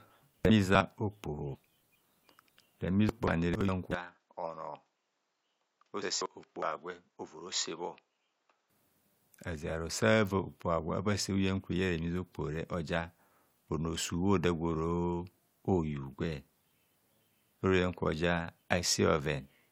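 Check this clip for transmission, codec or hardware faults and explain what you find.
One fault: from 3.94 s to 8.70 s the input was likely switched to a poorer device, one that passes nothing above 7.6 kHz. The speech turns duller and about 10 dB quieter, with a faint new noise floor around 50 dB down, and no gap at either switch.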